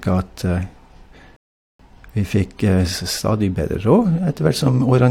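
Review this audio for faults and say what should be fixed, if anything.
Rebuffering stall from 1.36 to 1.79 s: the player ran out of downloaded audio, fell silent, then resumed the speech exactly where it stopped, adding 0.43 s.

To prevent it, keep a deeper playback buffer and switch to a lower bitrate when network throughput drops, so the player never runs empty.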